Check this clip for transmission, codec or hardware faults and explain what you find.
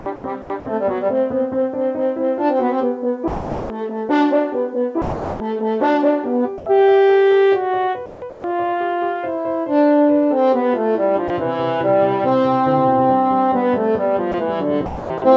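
The clip has repeated gaps and fills from a voice detector and discontinuous transmission, heard through a band-limited call path with nothing above 8 kHz, which fits G.722.

Sound chopped by the voice detector, at 0.0–0.5 s, 8.06–8.44 s and 14.86–15.22 s: the likely cause is a sender-side detector toggling on and off within each stretch. About 220 ms, 300 ms and 280 ms of sound are swapped for comfort noise, so the sound stutters.

Sound dropped by the voice detector, at 3.28–3.70 s, 5.02–5.40 s, and briefly at 11.28 s and 14.32 s (20 ms each): the detector likely mistook quieter sound for background and paused sending. Roughly 410 ms and 360 ms of sound vanish into steady noise before it returns.

Comfort noise in place of the background, at 6.58–6.66 s: for 80 ms the real background, about 21 dB below the loud parts, is likely replaced by synthetic noise during a transmission pause. 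The level stays the same, but the texture turns flat and featureless.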